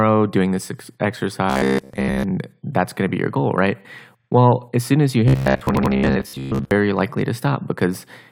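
From 1.5 to 2.23 s the speech takes on a robotic sound from repeated short buffers: a rigid, metallic buzz at 66.8 Hz that still tracks the syllables loosely. The likely cause is audio arriving too slowly, so the playback software keeps looping a stretch of about 15 ms (one period of that buzz), and most of the real signal in this window is lost.

At 4.19 to 4.28 s there are repeated frames. A 42.7 ms block plays twice more than it should, producing a quick stutter and adding 85.3 ms to the timeline. The block length fits a pair of compressed frames being duplicated.

The same 66.8 Hz robotic buzz returns from 5.28 to 6.71 s, again likely discarding most of the original audio in favour of the repeated short buffer. Inside that stretch, from 5.75 to 5.92 s, a second run of repeated frames occurs. An 85.3 ms block, which points to four frames, replays twice, adding 170.7 ms and putting a stutter on top of the buzz.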